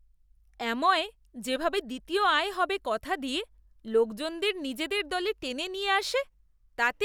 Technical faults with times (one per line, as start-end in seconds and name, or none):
none